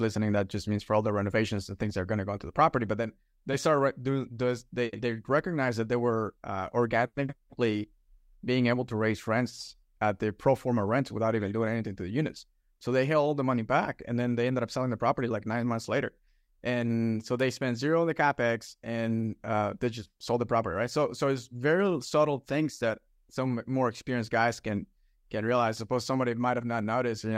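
At 17.40 s there is a bit error spike. A flipped bit briefly throws the sample value, likely across two samples, peaking near about -27 dBFS. It is one sharp broadband tick.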